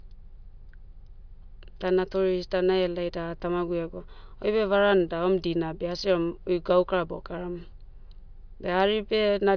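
No technical faults are audible.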